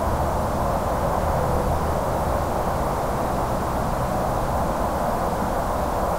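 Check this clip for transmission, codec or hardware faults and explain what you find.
A stuck bit, likely in a faulty data line or converter, runs through the whole clip. With one bit held fixed, about half the samples jump by a step of roughly -35 dBFS, adding harsh, buzzy distortion and filling quiet passages with a steady noise floor.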